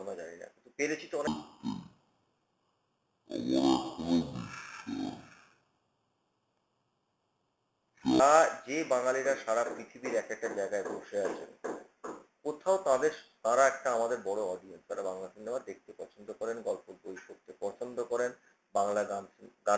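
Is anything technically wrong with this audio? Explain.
Yes. From 1.27 s to 8.20 s the audio suffers a wrong sample rate fault: material recorded at 32 kHz is played back at 16 kHz without conversion, so it runs at half speed and drops a full octave, 12 semitones. The sound turns slow, low and drawn out. On a spectrogram every harmonic and formant band sits at half its normal frequency and each event is stretched to twice its length in time. In the waveform the cycles appear correspondingly wider.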